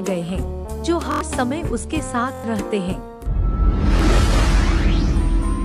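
Repeated buffers at 1.12, 2.35 and 3.97 s: playback ran short of fresh audio and replayed its last 23 ms block, which fits a 1024-sample buffer. The first two loop four extra times, a buzzy stutter dropping about a tenth of a second; the third repeats once, a single click.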